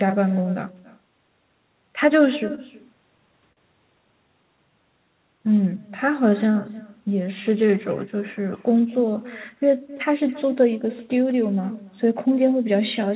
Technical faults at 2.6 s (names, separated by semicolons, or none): echo with no canceller; short stall from a late packet